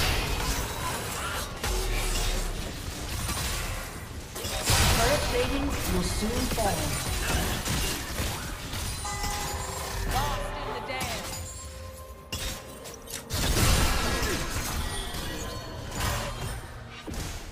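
No technical faults are audible anywhere in the recording.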